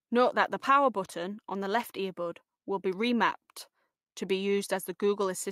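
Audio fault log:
No technical fault can be heard anywhere in the speech signal, which holds steady without any break or disturbance.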